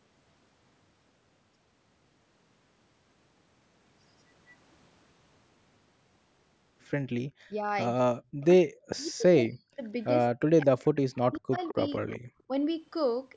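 From 7.43 to 7.67 s, 8.05 to 8.44 s, 8.68 to 9.83 s and 10.32 to 11.52 s the talker's speech drops out almost entirely. This is speech suppressed in double talk, likely from an echo canceller that couldn't tell the local talker from loudspeaker echo while both sides spoke and so muted everything. In the waveform the envelope collapses to near silence, roughly 40 dB down. On a spectrogram whole vertical bands go dark.

At 11.16 s, 11.67 s and 12.08 s, brief scraps of delayed voice come through, an echo leak probably caused by residual loudspeaker pickup that the canceller failed to remove. Each copy trails its source by 207 ms and is about 30 dB, then about 20 dB, below the speech. On a spectrogram they appear as faint, short smears repeating earlier harmonics.

At 12.47 to 12.55 s a shallower dip, about 15 dB, briefly ducks the speech again.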